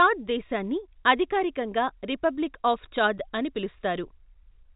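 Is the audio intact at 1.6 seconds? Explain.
Yes, the audio at 1.6 seconds is intact, carrying only the narrow telephone band of G.711 telephone coding, with nothing heard above about 3.8 kHz.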